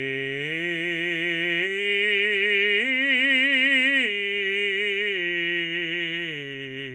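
No technical faults can be heard anywhere in this music. Nothing in it points to a fault in the recording or playback chain.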